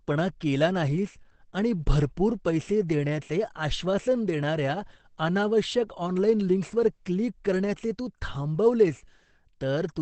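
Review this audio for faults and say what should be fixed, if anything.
Throughout the speech, the sound is muffled and hoarse, likely from heavy Opus compression in its speech mode, at a rate that fits roughly 12 kbps. Encode at a higher Opus bitrate so the encoder stays in full-band music mode.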